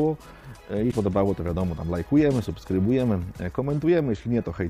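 At 0.90 s the audio skips forward and a short, garbled disturbance lasting about 30 ms replaces the signal, ending at 0.93 s. The likely cause is a broken MP3 bit reservoir: frames appear to have been dropped, so the frame after the gap reaches back into borrowed space and decodes bytes belonging to a different frame. The disturbance spans roughly one frame, matching the 26.1 ms frame length, before decoding recovers.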